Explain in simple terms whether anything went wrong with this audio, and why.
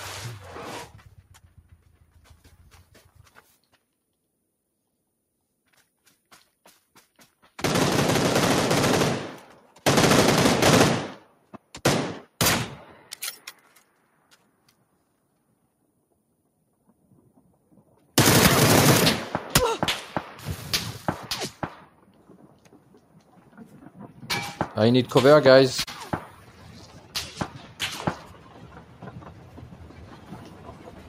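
A noise suppressor applied to music or sounds stays on throughout. Built for speech, it mistakes steady tones and fading tails for noise and keeps turning them down.

Sound cut by the noise suppressor: held or fading sounds sink while sudden ones get through, at 0.87–3.76, 11.21–11.74, 12.84–14.94, 16.88–18.15, 21.79–24.26, 26.27–27.15, 27.47–27.81 s, and from 28.16 s to the end.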